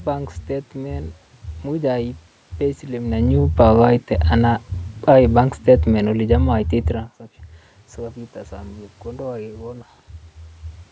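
Just after "aiip payslip", at 3.03 s, automatic gain falling begins. The gain control judged the input too loud, or its background noise too strong. It responded by pulling its gain down slowly rather than at once. By 6.56 s the level has dropped by about 5 dB. The voice sinks, and the room noise behind it sinks with it. That shared drop marks it as gain control. A talker shifting position near 3 s and 7 s would move the voice alone.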